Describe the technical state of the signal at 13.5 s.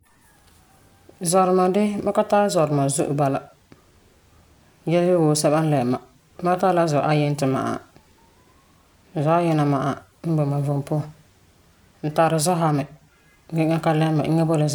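At 13.5 s the speech signal is intact, with no technical fault present at that moment.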